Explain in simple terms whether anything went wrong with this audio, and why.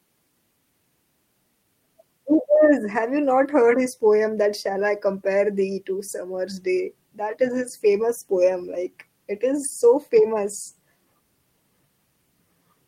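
Nothing went wrong here: the recording has no audible faults, just speech.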